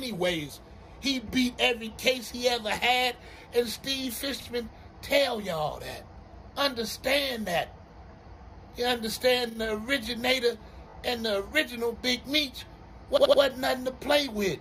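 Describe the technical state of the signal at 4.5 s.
Just before 4.5 s, from 4.41 to 4.47 s, the audio has repeated frames. A 60 ms block of compressed data was played twice, which fits a run of three frames being decoded again, so the same fraction of a second is heard a second time and the timeline runs 60 ms longer. It sounds like a short stutter. Dropped frames would leave a gap or a jump forward, but here nothing is lost. The sound is doubled.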